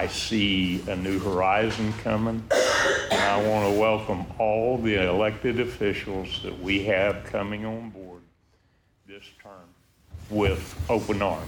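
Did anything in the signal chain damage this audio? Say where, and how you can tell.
Yes. Zipper noise from 7.32 to 8.38 s points to the gain stage in software, at the driver or buffer level. The level falls by roughly 20 dB in 2 dB steps, about ten per second. Each unsmoothed jump clicks, giving a ticking texture during the fade.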